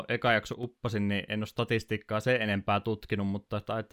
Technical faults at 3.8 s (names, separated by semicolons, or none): none